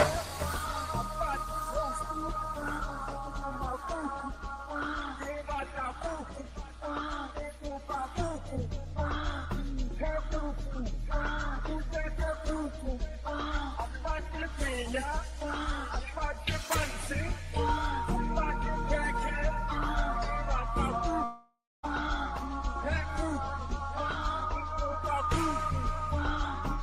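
From 21.24 to 21.85 s, a smeared, fading buzz flattens into 0.25 s of near-silence, a blank band on the spectrogram, likely a long network dropout.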